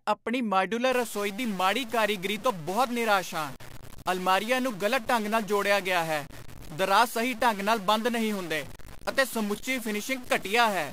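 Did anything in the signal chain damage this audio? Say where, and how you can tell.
Yes. From 0.92 s, just after "ਆਪਣੀ ਮਾਡਿਊਲਰ", to the end, the speech carries a harsh, buzzy stuck bit distortion, most likely from a broken data line or converter stage. With one bit frozen, about half the samples jump by a fixed step of around -40 dBFS, and pauses fill with noise that flips with small signal swings. A spectrogram shows broadband hash persisting through gaps, and the waveform shows small square offsets riding on the signal.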